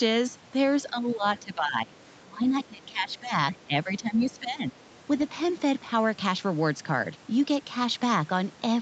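A speech recording, band-limited to about 8 kHz. Three stretches of the voice sink and break up, from 0.9 to 1.97 s, 2.18 to 3.35 s and 3.52 to 4.81 s. Level falls by roughly 15 to 20 dB in places and the speech comes through in pieces. This is likely speech suppressed in double talk. The echo canceller could not tell the talker from returning far-end sound, so it turned both down.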